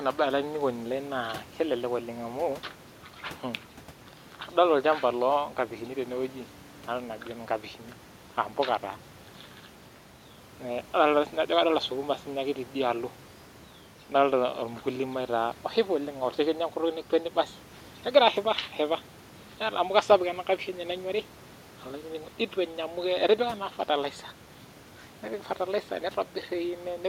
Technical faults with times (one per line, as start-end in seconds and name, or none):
none